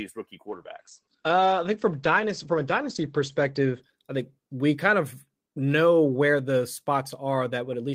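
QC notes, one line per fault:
0.49–4.91 s, call bitrate drop: the bandwidth estimate fell and the encoder was starved of bits, which fits a slide from roughly 48 to 11 kbps. Coarser coding roughens and muffles the speech, and top end above 8 kHz vanishes, staying worst for 2.85 s.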